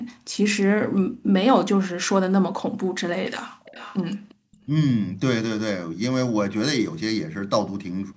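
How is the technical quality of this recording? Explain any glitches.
The recording has three kinds of trouble, and they overlap around 3.5 to 4.6 s.

Background gated by the echo canceller: at 1.12–1.25, 3.51–3.63 and 4.35–4.52 s the room sound drops by about 38 dB, because the canceller clamps the mic while the far-end loudspeaker plays.

Pre-emphasis left on: from 3.27 s to the end the treble is boosted by about 11 dB at 10 kHz with no matching cut, so the sound turns thin, bright and hissy.

Echo leak: a delayed copy trailing by about 0.35 s appears at 3.64–3.98 s, around 20 dB down, with fainter scraps at 4.29–4.35 and 4.52–4.57 s. It likely comes from a speakerphone's echo canceller not fully removing its own playback.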